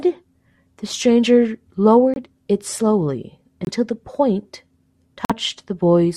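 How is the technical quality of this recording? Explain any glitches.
The recording has three short holes from corrupt frames being muted, at 2.14 to 2.18 s, 3.65 to 3.69 s and 5.25 to 5.32 s. Damaged compressed frames were rejected by the decoder, and silence was put in their place. Each gap cuts in abruptly, lasts about 40 to 65 ms, and leaves the speech timing intact. That sets it apart from a time-skipping dropout or a smoothed-over concealment.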